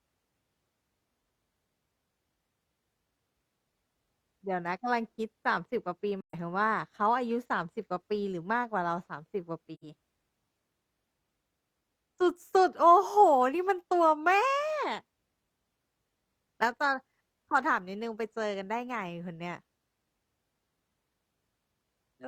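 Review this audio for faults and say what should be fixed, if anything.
AAC frame loss with muting breaks the speech twice, from 6.21 to 6.34 s and from 9.74 to 9.84 s. Audio is missing for about 128 ms and 85 ms, which fits three and two lost frames. The decoder zeroed those frames. Overlapping windows fade the sound out and back in, leaving soft-edged silent holes. To prevent it, protect the stream against packet loss with retransmission or forward error correction, or use a decoder that conceals lost frames instead of muting them.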